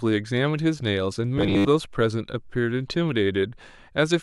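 From 1.38 to 1.68 s the speech collapses into robotic sound from repeated short buffers: a rigid, metallic buzz pitched at 100 Hz that still loosely tracks the syllables. The likely cause is audio arriving too late, with playback looping the last 10 ms or so for most of that stretch while the real audio is skipped. Unlike plain dropouts, there are no silent gaps, only a fixed, machine-like pitch.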